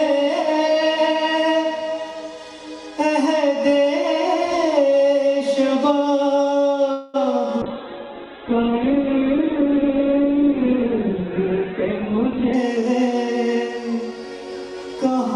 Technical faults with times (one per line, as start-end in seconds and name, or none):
6.91-7.16 call audio freeze
7.63-12.60 call bitrate drop
11.98-14.88 jitter buffer speed-up